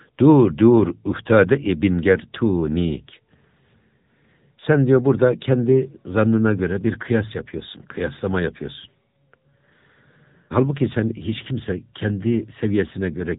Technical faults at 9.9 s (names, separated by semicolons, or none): AMR narrowband mobile codec